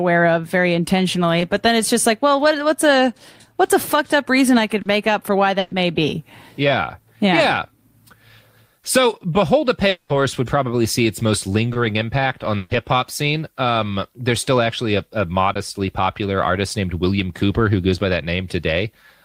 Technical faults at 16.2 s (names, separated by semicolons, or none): none